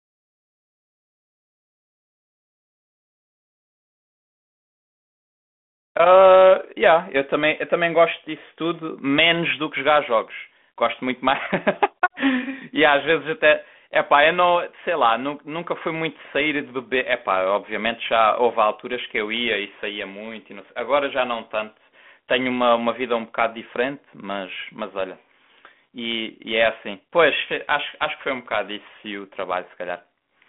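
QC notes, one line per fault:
No faults found in this speech clip.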